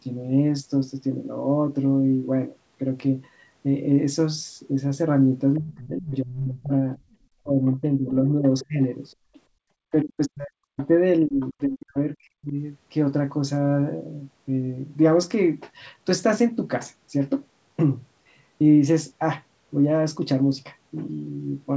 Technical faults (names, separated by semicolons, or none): other side's voice leaking through; speech suppressed in double talk; background gated by the echo canceller